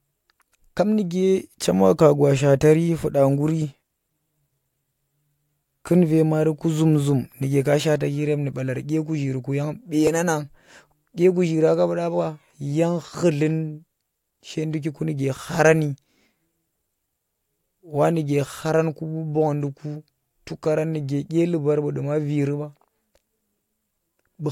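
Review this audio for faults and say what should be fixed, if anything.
At 10.07 s there is a small jump in the speech, most likely a dropped buffer (overrun), where samples were overwritten before being read and the two sides were joined directly. Only a few milliseconds are gone, so no syllable is lost. The waveform shows an abrupt step discontinuity, and the spectrogram shows a thin vertical broadband line. To prevent it, enlarge the capture buffer or give the recording thread higher priority.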